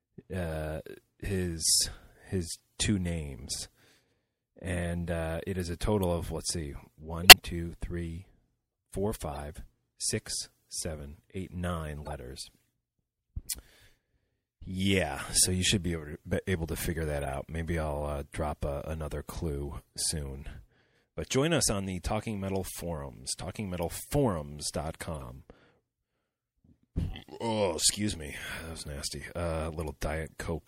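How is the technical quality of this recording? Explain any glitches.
The speech is clearly degraded. A constant compression sound runs through it, and five brief digital glitches interrupt it.

Throughout the clip, the speech sounds watery and swirly, with dulled treble. This is likely MP3 compression, and it fits a low bitrate around 64 kbps.

There are corrupt frame decoded glitches at 7.23 s, 9.33 s, 12.05 s, 17.21 s and 25.15 s. Each lasts roughly 70 to 130 ms. Damaged compressed frames were played anyway, so energy lands at wrong frequencies. The result is a short chirp or burst. The first, after "total of let's see", is the strongest of the five. Another comes just before "six seven eight nine", and one follows "able to figure that".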